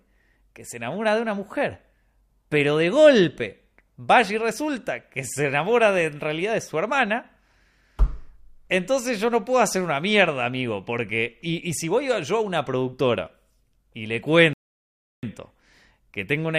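Around 14.53 s, right after "una productora y le", there's a rebuffering stall: the player starved, the speech drops to silence for about 0.7 s, then picks up exactly where it stopped.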